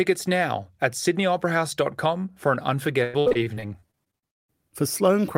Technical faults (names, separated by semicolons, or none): repeated packet loss (robotic sound)